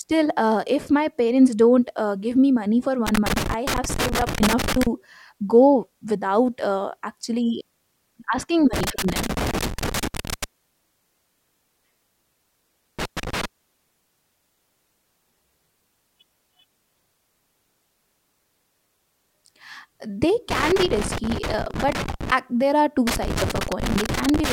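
Loose connector crackle breaks into this speech clip at 3.07–4.87 s, 8.73–10.44 s, 12.99–13.45 s, 20.51–22.31 s and 23.07–24.53 s, the last starting just after "there are two". A worn contact repeatedly chops the signal, producing irregular scratchy bursts.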